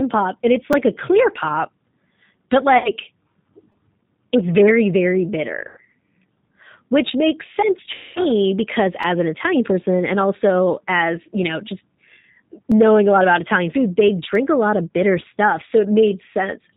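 G.729 codec damage runs through this whole speech recording and is plainly audible: nothing above 4 kHz survives, and the voice has the slightly rough, synthetic grain of a low-rate model that rebuilds each 10 ms frame from a vocal tract filter, a pitch predictor and a few pulses, consistent with 8 kbit/s. VoIP packet loss concealed by the speech codec appears at 2.78 to 2.92 s, 5.68 to 5.79 s and 7.94 to 8.19 s, covering 60, 90 and 210 ms of missing audio, which fits two, three and seven 30 ms packets. The decoder stretches its last pitch and filter into a fading buzzy tone or coloured noise, and the voice stays weak for a while after audio resumes. A repeated buffer is heard at 0.73, 3.72, 9.03, 12.72 and 14.35 s as brief clicks or buzzy stutters, where a piece of about 5 ms, which fits a very small output buffer, plays one to three extra times with a hard join at each repeat, with essentially no audio skipped.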